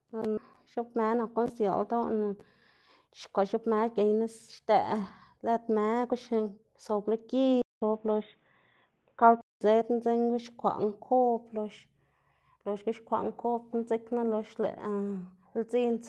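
At 0.37 s the playback makes a skip ahead: roughly a second of speech is discarded and the two sides are butted together with no silence or fill. Unlike a dropout, nothing sounds missing as a gap; the sound simply lurches forward.

Jitter buffer speed-up follows in three bursts: 0.77 to 2.28 s at 109%, 3.07 to 4.22 s at 123%, and 5.45 to 6.57 s at 110%. Short pitch-period slices are trimmed repeatedly, so delivery sounds rushed while pitch stays put, which separates it from a resampling or clock error.

From 7.62 to 9.61 s the sound turns boxy and dull after a 200 ms silence, most likely because the input switched to a poorer device. Nothing above 3.8 kHz gets through, the level shifts by about 5 dB, and a new noise floor appears about 40 dB down. The Opus call path carries content up to 12 kHz, so this narrowing belongs to the input rather than the codec.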